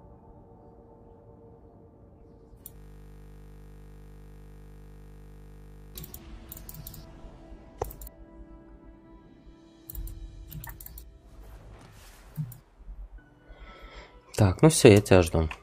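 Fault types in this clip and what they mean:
System hang loop: the system stalled while the hardware kept replaying one 20 ms slice of its ring buffer, giving a steady 50 Hz buzz from 2.76 to 5.95 s. The waveform shows one identical cycle tiled end to end; the spectrogram, frozen horizontal harmonics 50 Hz apart.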